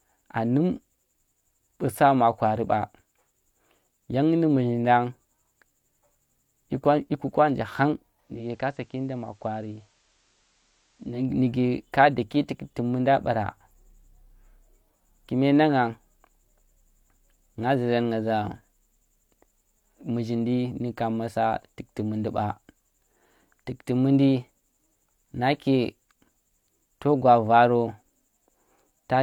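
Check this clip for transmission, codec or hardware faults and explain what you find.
One transmission fault is present. Digital radio blending to analogue, 8.18 to 11.33 s: the receiver cross-fades over about 306 ms to the FM signal, dropping about 5 dB and adding faint hiss, before returning ahead of "ka daki tukti munda".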